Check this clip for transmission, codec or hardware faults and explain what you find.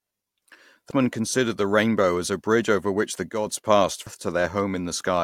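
Two kinds of fault turn up in this speech clip: brief corruption of the compressed stream in two places, and a short, abrupt level step.

At 0.91 s and again at 4.07 s there is a brief glitch. This is damaged data in a compressed stream. Bad bytes there made the decoder misread the frame, lose sync and jump ahead to the next frame header.

From 3.31 s to 3.47 s the speech and the background noise drop together by about 7 dB, with a hard edge at each end rather than a fade. This is a sudden gain jump, likely from a digital gain change applied without a ramp.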